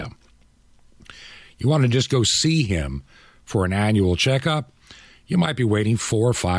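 Nothing stood out on listening to this speech recording.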